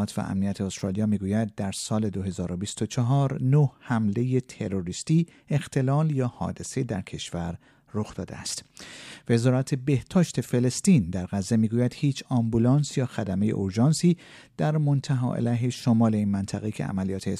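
Nothing in this recording stands out as a technical fault; the audio just runs along without any glitch, dropout or oddity to point to.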